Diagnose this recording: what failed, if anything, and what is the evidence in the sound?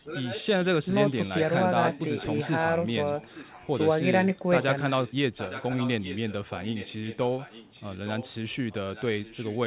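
Echo leak at 0 to 0.65 s, 1.09 to 2.5 s, 3.03 to 3.89 s, 4.62 to 5.14 s, 5.37 to 8.34 s and 8.69 s to the end: a second copy of the speech trails the original by 865 ms. It is strongest at first, about 10 dB below the speech, then sits roughly 15 to 20 dB down. The stage is call processing. The likely cause is a far end on loudspeaker whose echo canceller let the microphone's pickup back into the call.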